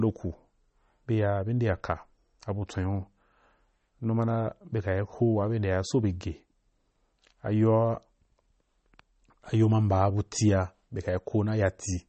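From start to finish the speech is band-limited and swirly, with watery, chirping sibilants and smeared consonant onsets. This is plainly audible damage from what is likely MP3 compression at a starved bitrate, which fits roughly 32 kbps. Short of bits, the encoder removes all treble above 8.4 kHz and switches weak frequency lines on and off between frames. On a spectrogram this appears as a hard ceiling at 8.4 kHz with a blotchy, flickering upper band beneath it.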